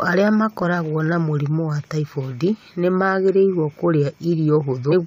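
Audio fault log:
4.91–4.94 s, damaged data in a compressed stream: near the very end of the speech, a brief glitch of about 24 ms breaks through as the decoder hits corrupted bytes, misreads the frame and loses sync until it finds the next valid header.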